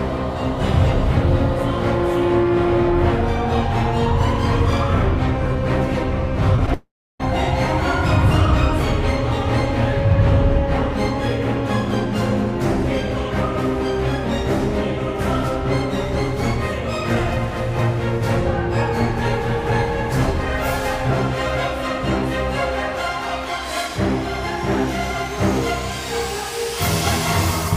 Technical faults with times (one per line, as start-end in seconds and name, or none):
6.56-6.72 repeated packet loss (robotic sound)
6.74-7.21 long network dropout